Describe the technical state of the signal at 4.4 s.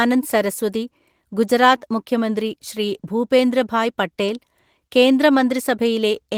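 At 4.4 s the speech signal is intact, with no audible technical fault at that moment.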